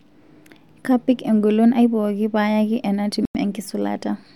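At 3.25 s the speech drops abruptly to silence for about 96 ms, with playback resuming at 3.37 s. The pattern matches a Bluetooth stall: wireless interference likely delayed packets on the link, so the receiving buffer emptied and output paused until retransmitted data arrived. The sound is a clean hole in the signal rather than noise or distortion, with the audio picking up again directly after the gap.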